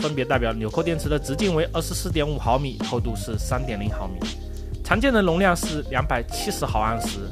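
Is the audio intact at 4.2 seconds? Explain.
Yes, the audio at 4.2 seconds is intact, with no dropout, click, distortion or other fault at that moment.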